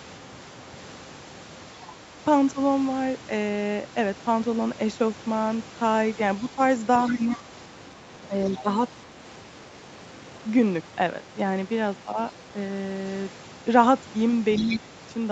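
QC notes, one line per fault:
1.83–1.93 s, 7.07–8.62 s, 14.56–14.79 s: other side's voice leaking through. A second voice sits under the talker. It is brief and around 25 dB down at first, then a longer stretch around 15 dB down, and in the last burst only about 10 dB below the talker. The likely cause is loudspeaker sound reaching the microphone and surviving echo cancellation. On a spectrogram this shows as a second, fainter harmonic stack with its own pitch contour, overlapping the main one and stopping near 8 kHz like the rest of the band.
2.04–2.10 s, 6.56–9.08 s, 12.05–12.18 s, 14.65–14.85 s: speech suppressed in double talk. The talker's level dips in short bites: about 5 dB at the first and third spots, up to about 10 dB across several pieces totalling roughly 400 ms in the long stretch, and about 15 dB at the end. The likely cause is an echo canceller that could not tell the talker from the overlapping far-end voice and attenuated everything. 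The waveform shows sudden notches in the envelope.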